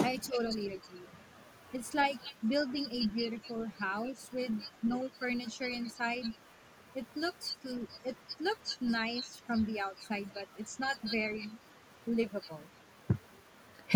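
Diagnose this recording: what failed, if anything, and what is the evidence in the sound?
From 0.21 to 0.26 s a faint, delayed copy of the speech surfaces, trailing the original by 327 ms and sitting roughly 30 dB below it. The stage is call processing: an echo leak, likely from a far-end loudspeaker whose echo canceller let part of its microphone pickup return down the line.

Right after, from 0.28 to 0.4 s, the talker's level sags by around 10 dB over about a tenth of a second. This is speech suppressed in double talk, likely the echo canceller mistaking live speech for echo and attenuating both.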